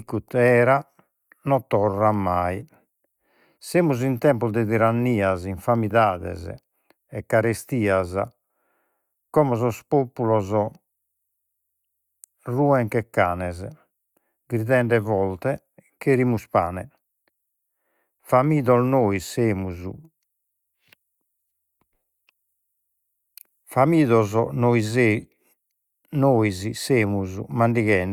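No technical faults can be heard anywhere in the recording; the signal runs without any audible disturbance to its sound.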